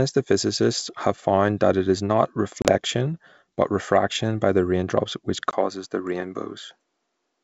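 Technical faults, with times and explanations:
2.62–2.69 s, packet loss on an ADPCM call: about 30 ms of data went missing and the gap was filled with silence, leaving a hard-edged hole. The decoder's predictor then restarted out of step, briefly distorting the speech.
5.51 s to end, input switched to a poorer device: likely a change of microphone mid-call. After a 20 ms silence the sound loses everything above 9.5 kHz and gains faint new background noise at a similar level.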